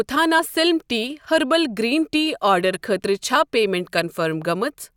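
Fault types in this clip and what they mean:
Compressed frames skipped: Around 0.38 to 0.40 s, just before "سلِم ٹی", the speech jumps forward by roughly 20 ms. A small run of compressed frames never reached the output, either because it was missing or because the decoder discarded it as damaged.
Corrupt frame decoded: Two brief glitches occur. The first, at about 2.74 to 2.77 s between "گریٖن ٹی" and "خٲطرٕ چھا پیمیٚنٹ", peaks around -20 dBFS. The second, at about 3.98 to 4.00 s right after "خٲطرٕ چھا پیمیٚنٹ", is louder, near -10 dBFS. Each lasts about two frames' worth. Flipped bits gave the decoder wrong gains or codes, and it played them, putting energy at the wrong frequencies.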